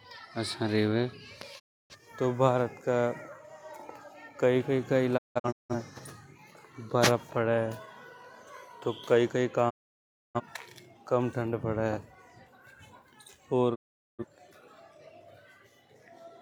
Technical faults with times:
1.58-1.95 digital broadcast dropout
5.16-5.75 digital broadcast dropout
9.69-10.40 digital broadcast dropout
13.74-14.24 digital broadcast dropout

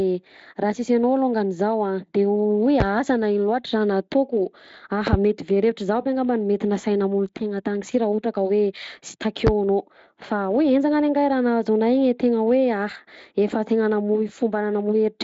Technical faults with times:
2.80-2.83 loud pop
5.07-5.16 loud pop
9.47-9.50 loud pop

